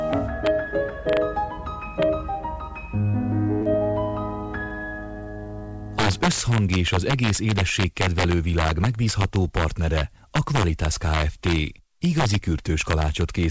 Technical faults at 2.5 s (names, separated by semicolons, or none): integer overflow